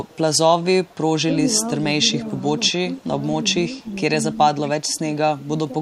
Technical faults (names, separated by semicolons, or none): echo leak; speech suppressed in double talk